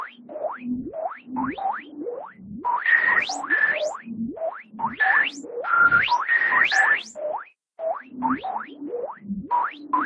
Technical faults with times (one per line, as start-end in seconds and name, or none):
none